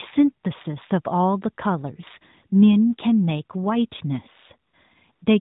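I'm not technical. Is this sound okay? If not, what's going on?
No. Near the end, the phone briefly judged the speech silent and stopped sending it. This is AMR comfort noise: a smooth, steady fill replaces the real sound from 4.70 to 4.74 s and from 5.12 to 5.22 s, over the phone call's usual narrowband sound.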